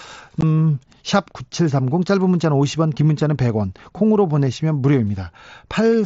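At 0.41 s, unconcealed Bluetooth headset packet loss cuts a 15 ms hole in the speech, which fits two lost packets; unlike a concealed gap, it falls to silence or an idle pattern with abrupt edges.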